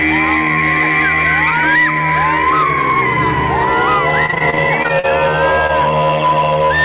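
From 4.26 to 5.71 s, repeated packet loss hits the stream: about eleven holes open in quick succession, the longest about 44 ms, and the receiver covers them by extending the last good sound, roughly 228 ms of fill in total, with some 140 ms simply gone. The passage turns choppy, a robotic stutter with fragments missing, heard through a band that stops at 4 kHz, as a G.711 call path would produce.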